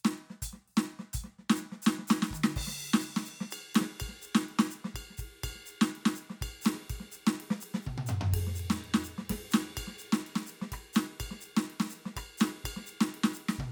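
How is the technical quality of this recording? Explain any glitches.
The music runs without any audible technical problems.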